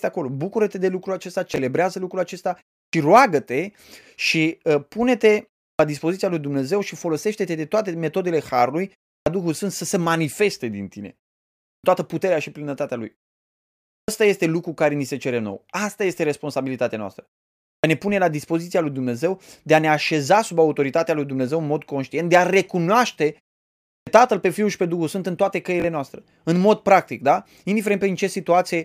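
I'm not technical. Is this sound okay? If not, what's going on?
No. There are two separate problems.

Several times the speech jumps in abruptly out of a short silence, as if its first sound were bitten off: at 2.86, 5.72 (on "dispoziția lui"), 9.18, 11.75 (on "toată puterea și plinătatea"), 14.0, 17.76 and 23.99 seconds. This is a clipped start after a pause. During each gap of about a third of a second to a second, the playback device dozes off, and it needs roughly 70 to 90 milliseconds to wake up again. The start of the next sound is lost in that time.

Twice, at 1.54 and 25.8 seconds (the second right after "în toate"), there is a brief jumbled blip. These are chunks out of order. A 20-millisecond slice of audio arrived one slot late and played after the slice that should have followed it. Nothing is missing, but the sequence is scrambled for a moment.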